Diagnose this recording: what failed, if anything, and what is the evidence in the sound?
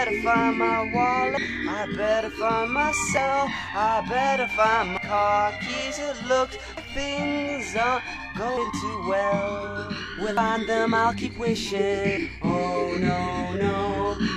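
The sound skips abruptly at 1.37, 3.17, 4.97, 6.77, 8.57, 10.37 and 12.17 s, each time losing about a fifth of a second with no gap. This is likely audio missing between chunks at the buffer stage, dropping audio as each 2-second block closes.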